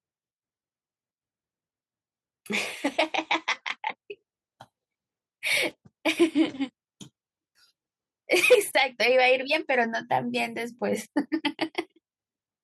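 No technical faults detected.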